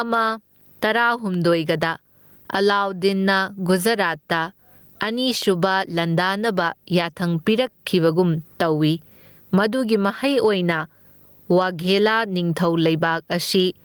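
A steady buzz at 50 Hz with a gritty hash above it runs under the speech from start to finish, joined by a thin whine at 15.6 kHz, all sitting roughly 40 dB below the speech. This is video or display buzz: a screen or video cable is coupling into the audio path at the picture's field rate and line rate.

Throughout the clip, the level is pulled down as each loud syllable arrives, bringing loud and soft parts closer together. The swing is around 20 dB, and the speech sounds squashed and flat. This gain pumping is likely from the input gain being set far too high, with a fast limiter or compressor hauling it down on every peak.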